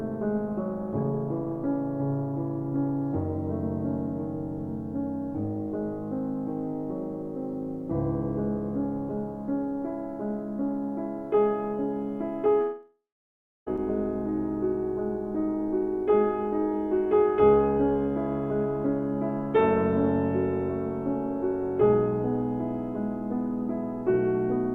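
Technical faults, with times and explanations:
12.61–13.68 s, long network dropout: the sound smears into a buzzy continuation that fades, leaving about 0.64 s of near silence, then returns with 1.06 s of material skipped. The likely cause is incoming audio stopping, with the receiver stretching the last sound until it ran out.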